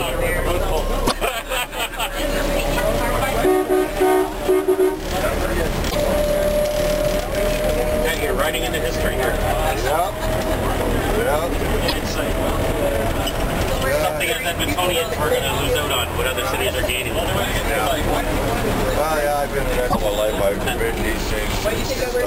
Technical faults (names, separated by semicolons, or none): damaged data in a compressed stream